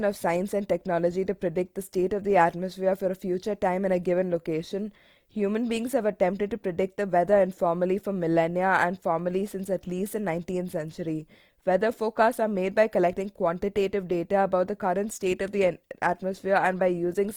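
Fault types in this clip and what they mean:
Opus compression: Throughout the clip the speech has a rough, grainy, noisy texture, yet the top end still reaches about 20.2 kHz. That fits Opus music mode at a low bitrate, likely around 24 kbps, filling starved bands with noise.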